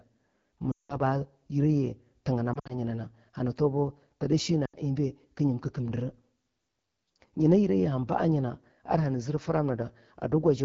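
Speech, heard through the AMR wideband (HD Voice) codec for the whole clip. The voice sounds rough and raspy. The air above about 6.4 kHz is replaced by shaped noise. That harshness fits one of the lowest rates, around 8.85 kbit/s. There are also lost AMR speech frames at three points. From 0.71 to 0.94 s, about 180 ms of audio drops to near silence. From 2.54 to 2.75 s, short gaps scattered over about 160 ms cause dips and warbles. From 4.65 to 4.76 s, a brief dropout of about 80 ms occurs. In each case the decoder repeats its last good settings at falling gain, and the voice returns weak for a moment.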